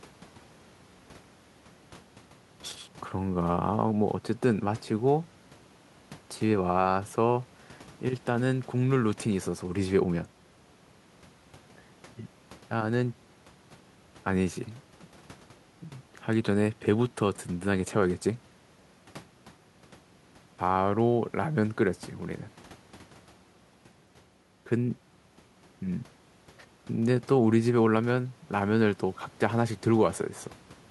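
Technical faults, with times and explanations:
Nothing technical gets in the way here; the speech comes through without a single glitch worth pointing to.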